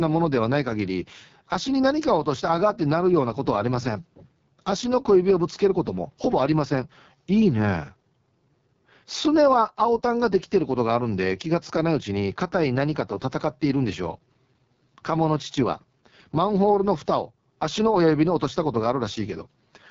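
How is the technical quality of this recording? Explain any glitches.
The recording has heavy codec damage from start to finish.

AMR wideband (HD Voice) codec, throughout: speech is rebuilt from a pulse-excited vocal tract model with noise filling the top band, and here the result is rough and raspy, which fits the lowest 6.6 kbit/s mode. Nothing is heard above about 7.3 kHz.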